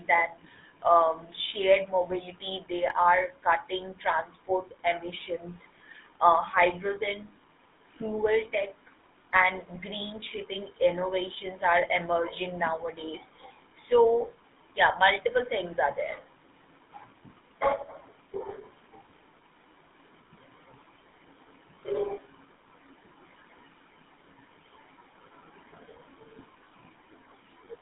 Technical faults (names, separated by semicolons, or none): GSM full-rate codec